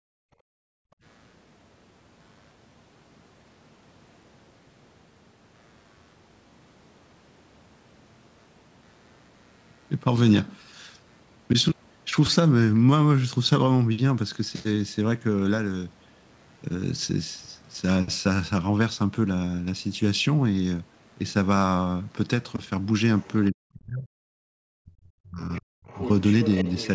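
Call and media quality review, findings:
Computer activity noise throughout: low buzz pulsing at around 100 Hz, very faint, roughly 45 dB under the speech. Shared-ground interference from processor or peripheral load. Spectrogram: comb of thin lines about 100 Hz apart under all content, unrelated to speech energy.

Background gated by the echo canceller at 0.00–1.03 s and 24.35–24.53 s: room tone drops out, deepest drop about 40 dB, then returns. Canceller clamping microphone gain while the loudspeaker played. Waveform: noise floor collapses to near-flat; spectrogram: blank vertical gaps.

Other side's voice leaking through at 23.19–23.47, 25.53–25.61, 25.87–26.09 and 26.27–26.88 s: a second voice underneath, faint at first, near speech level by the end. Likely uncancelled loudspeaker echo reaching the microphone. Spectrogram: separate, fragmented harmonic traces.

Speech suppressed in double talk at 23.51–24.07 and 24.81–25.90 s: talker's voice ducks very deeply. 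Likely echo canceller unable to separate talker from loudspeaker echo, attenuating both. Waveform: envelope dips deeply.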